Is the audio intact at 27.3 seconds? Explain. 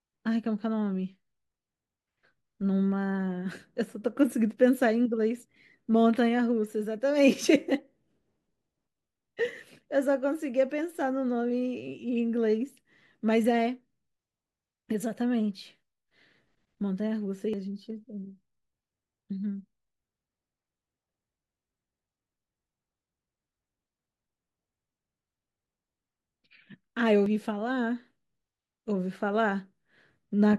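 No. At 27.26 s the decoder skipped compressed frames: one whole frame, about a tenth of a second of audio, was either missing from the file or rejected as damaged, so playback jumped straight past it. The frame length of 85.3 ms fits a decoder working in fixed blocks of that size. At the join the speech lurches forward by the length of the missing audio.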